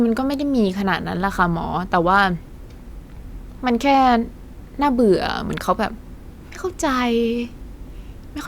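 No technical faults can be heard anywhere in this speech recording.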